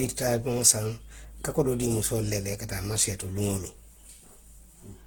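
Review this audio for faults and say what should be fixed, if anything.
Throughout, the speech carries stacked coding artefacts with nothing above 18.5 kHz, likely from transcoding between lossy codecs, with HE-AAC re-encoding earlier Opus damage. Encode once from the original, uncompressed source.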